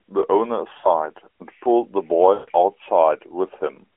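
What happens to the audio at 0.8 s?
From 0.78 to 0.88 s, about 60 ms of speech is lost to lost AMR speech frames, which fits three 20 ms frames failing their checksum. The narrowband decoder fills the gap by repeating its last good pitch and vocal tract settings at falling gain, so the voice smears into a brief drawn-out, fading tone. Unlike a plain dropout, which cuts to abrupt silence, this concealment keeps a stretched, synthetic tail before the speech returns.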